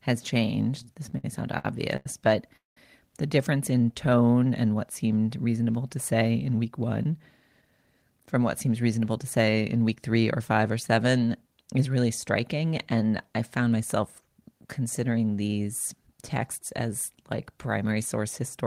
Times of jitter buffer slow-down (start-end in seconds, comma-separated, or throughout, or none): 3.78-4.46